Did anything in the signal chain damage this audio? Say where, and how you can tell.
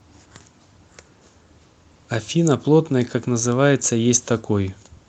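No, nothing in the signal chain damaged this speech. It has passed through a call path whose codec coloration and top end near 8 kHz are consistent with Opus at around 32 kbps, and that path is working as intended.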